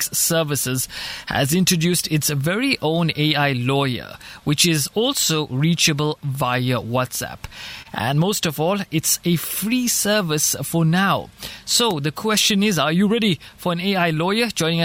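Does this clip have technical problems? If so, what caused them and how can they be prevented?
Yes. There is clock drift between sender and receiver. The sender's audio clock runs roughly one and a half percent slow, so the receiver's jitter buffer keeps draining and the receiver has to compensate throughout the clip, producing small recurring hiccups at uneven intervals rather than one clean break. To prevent this, lock both ends to a common clock reference or use adaptive resampling that tracks the sender's rate smoothly.

Repeated timing corrections run from 0.86 s to 14.81 s. Because the slow sender underfeeds the buffer, the receiver keeps repeating short pieces, all in the same direction, adding around a fifth of a second in total. The audio plays at about 99% speed. To prevent this, replace discrete piece repetition with continuous, inaudible resampling.

A short stall from a late packet occurs at 7.82 to 7.88 s. 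A packet missed its deadline, the buffer ran empty, and the receiver stretched the last sound by 30 ms until the packet arrived, then continued from the same place. Nothing is lost, but that moment is held slightly too long, raising the delay by 30 ms. To prevent this, keep a little more jitter-buffer headroom so occasional late packets arrive before they are needed.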